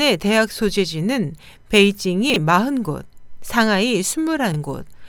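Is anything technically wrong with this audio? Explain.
Yes. Chunks out of order occur at 2.30 to 2.36 s and 4.52 to 4.56 s. A 20 ms slice arrives late, about two slices late the first time and one the second, and plays after the audio that should follow it. Each spot sounds briefly jumbled, with three hard joins, which appear on the waveform as abrupt discontinuities and on the spectrogram as thin vertical broadband lines.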